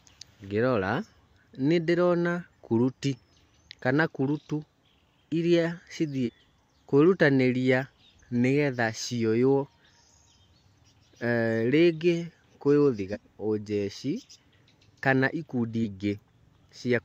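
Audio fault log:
3.12–3.18 s, 6.23–6.29 s, 13.10–13.16 s, 15.79–15.83 s: damaged data in a compressed stream. Each event is a brief disruption breaking into the speech, lasting about 40 to 70 ms. Part of the encoded data at these points is corrupt. The decoder misreads or refuses those frames. It then loses frame sync and hunts for the next valid header. Normal sound resumes once it locks on again.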